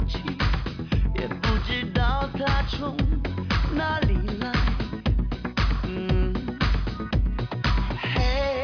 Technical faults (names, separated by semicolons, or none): none